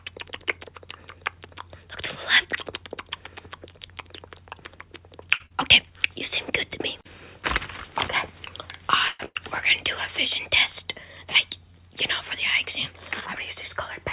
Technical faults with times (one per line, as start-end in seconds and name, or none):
5.34-5.42 short stall from a late packet
5.46-5.52 short concealed packet loss
9.08-9.21 call audio freeze
9.25-9.37 burst of packet loss